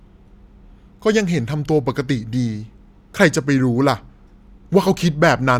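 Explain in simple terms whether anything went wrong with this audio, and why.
Nothing went wrong with this speech recording: no technical faults can be heard anywhere in it.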